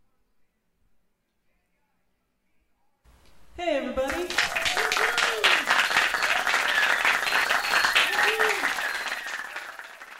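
At 7.43 to 7.45 s, damaged data in the compressed stream makes the decoder lose sync, giving a brief glitch, unlike a plain dropout's silence.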